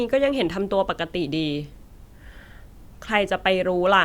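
No technical faults can be heard anywhere in this speech recording; the signal stays steady throughout, without any interruption or disturbance.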